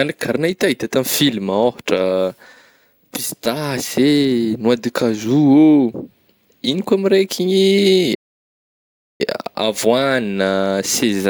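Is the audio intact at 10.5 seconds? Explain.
Yes, the speech at 10.5 seconds plays through intact, with no dropout, glitch or distortion at that point.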